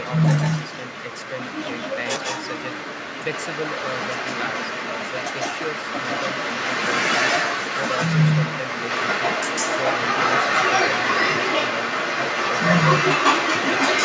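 This is a speech clip with an echo leak throughout. A second copy of the voice trails the speech by about 150 ms, roughly 5 dB louder than the speech itself. The likely cause is a far-end loudspeaker whose echo canceller let its own playback return.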